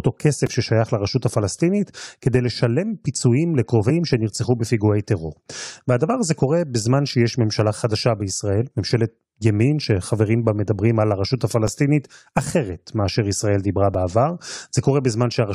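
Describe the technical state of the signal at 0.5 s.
Just before that point, at 0.46 s, there is a repeated buffer in the speech. Fresh audio missed its deadline, so the output replayed its last 2.9 ms block two extra times, which fits a 128-sample buffer. The hard joins give a brief click-like buzz, and a few milliseconds of real audio are lost.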